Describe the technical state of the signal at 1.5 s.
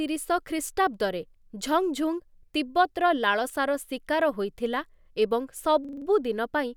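At 1.5 s the signal is intact, with no audible technical fault at that moment.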